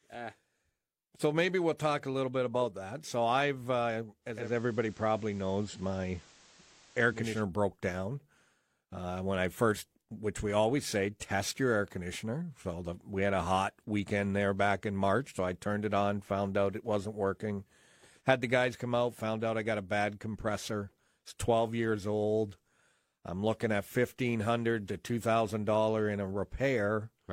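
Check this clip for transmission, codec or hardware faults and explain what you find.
One fault is present. From 4.21 to 7.45 s, after "I've uh", the digital radio blends to analogue. The receiver lost its digital signal and cross-faded to FM over 356 ms. Hiss appears roughly 30 dB down. Level shifts about 1 dB until "broke down".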